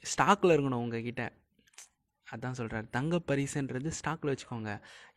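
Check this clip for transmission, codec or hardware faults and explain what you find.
No faults heard in this speech recording; nothing to report.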